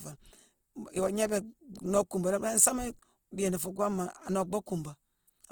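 Opus compression, running through the whole clip, is the likely cause of the plainly audible damage here. The codec stays in its music-style CELT mode and keeps the full band, with content reaching about 20.1 kHz. Starved of bits, it rebuilds band energies by folding lower bands upward or filling them with noise, which fits a rate near 16 kbps. The speech sounds rough and grainy, with noisy texture replacing clean harmonics.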